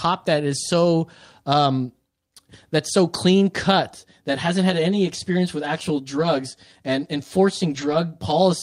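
Right after "that's so clean", at 3.96 s, the sound turns hollow and phasey through to the end. That's channel delay causing comb filtering: one channel lags by around 10 ms, and summing to mono cuts evenly spaced notches starting near 50 Hz.

At 6.19 s and again from 7.69 to 7.95 s you get a lost packet rebuilt from error correction. Low-bitrate backup copies fill the gaps, about 40 ms and then 140 ms, so nothing drops out, but those stretches sound grainier and rougher.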